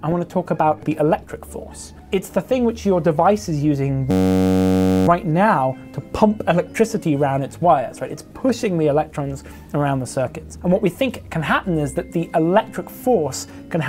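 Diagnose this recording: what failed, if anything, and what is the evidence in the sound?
A system hang loop runs from 4.11 to 5.08 s at the driver or buffer stage: a 10.67 ms fragment repeats 91 times, giving a steady buzz at 93.8 Hz. The system stalled while the hardware kept replaying its ring buffer, which fits a 512-sample buffer.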